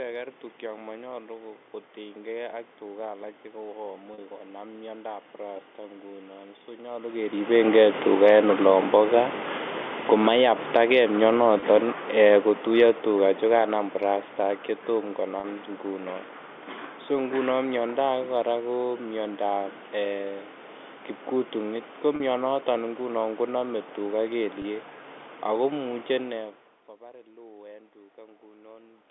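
At 4.14 s, packets are lost and the receiver fills the 40 ms hole by repeating the last pitch period. This packet loss with pitch repetition is too short to fade out, so the speech briefly holds on a slightly buzzy, frozen tone. From 9.97 s to 14.74 s, the automatic gain control judges the input too loud or its background noise too strong and lowers its gain gradually, by about 11 dB. The speech and its room background sink together as the automatic gain falls. Within that stretch, a 20 ms loss at 11.6 s brings the same short held buzz. Further concealed gaps follow at 15.4 s and 22.16 s (40 ms each) and at 24.62 s (20 ms). Those lengths fit the loss of one or two 20 ms packets.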